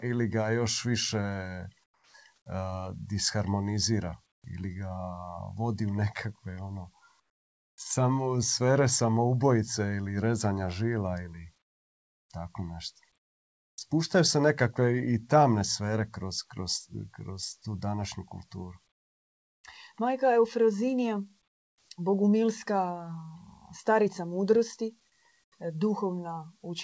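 Comfort noise in place of the background appears in eight speech pauses: 1.84–2.14 s, 4.32–4.44 s, 7.20–7.78 s, 11.62–12.30 s (after "rezanja žila ili"), 13.18–13.78 s (before "se nekakve i tamne"), 18.92–19.64 s, 21.48–21.88 s and 25.44–25.52 s. The likely cause is discontinuous transmission: the sender stopped sending during silence, and the receiver filled each gap with synthetic noise. That noise is smoother than the real background and about 5 to 25 dB quieter. On a waveform each gap is a flatter, lower stretch. On a spectrogram it is an even, featureless noise band under the 8 kHz ceiling of the call path, which fits a G.722 codec at 64 kbps.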